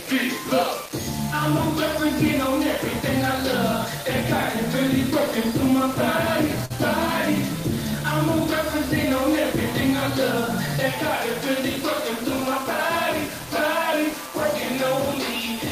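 From the first second to the end, the sound carries a coarse, grainy distortion that rises and falls with the signal, sitting only about 15 dB below it. Quiet passages turn gritty and the faintest ones sputter or drop out. This is low bit depth without dither, likely from the audio being rounded to something like 4 bits, so the error tracks the waveform. A waveform view shows visible stair-steps, and a spectrogram shows a raised, signal-following haze across all frequencies.

At 6.65 to 6.72 s there is a short concealed packet loss. About 40 ms of audio never arrived, and the receiver covered the gap with roughly 45 ms of synthetic continuation built from the preceding sound before blending back into the real signal. It is heard as a brief smear or wobble.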